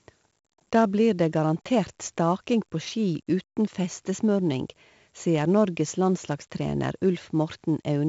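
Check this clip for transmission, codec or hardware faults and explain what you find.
4-bit ADPCM compression runs through the whole speech clip. Each sample is coded as a coarse 4-bit step from a prediction, so the error follows the signal's level, some 20 to 30 dB under it. The result is a gritty hiss on loud passages, with roughness on sharp attacks. On a spectrogram, nothing appears above 7.7 kHz, which fits a 16 kHz sample rate, and broadband noise rises and falls with the louder stretches.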